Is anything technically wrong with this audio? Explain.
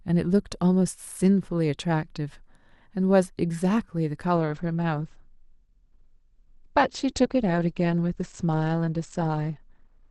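Yes. From 4.37 s onward, a slowed connection forces the adaptive stream to a lower bitrate. There is no gap, but nothing above 8.5 kHz remains, which fits a drop from Opus 64 to 16 kbit/s.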